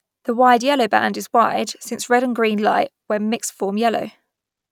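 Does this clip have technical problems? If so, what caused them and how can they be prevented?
No, the speech signal shows no audible technical faults anywhere in the clip.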